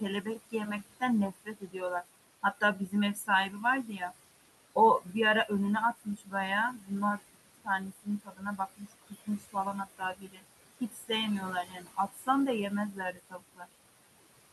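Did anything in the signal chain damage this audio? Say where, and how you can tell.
Yes. Noise suppressor artifacts run through the whole clip, introduced at the call-processing stage. The room noise, about 13 dB below the speech, is pulled down by about 19 dB between phrases and then swells back up under the speech, so the background pumps. The suppressor is applying frame-by-frame gain to each band it judges to be steady noise.

The same stage also causes speech cut by the noise suppressor at 0.22–2.04, 2.43–4.12, 4.75–5.15, 5.98–6.34, 6.74–9.56, 9.98–10.45, 10.81–12.28 and 12.7–13.69 s. In these spans, soft consonants and word endings sound swallowed, with drops of up to about 22 dB. The worst stretch is 6.74–9.56 s, where about 1.5 s of speech is turned down. Because the noise sits only about 13 dB under the speech, the quiet parts of the speech fall inside the suppressor's noise estimate and get attenuated along with the background.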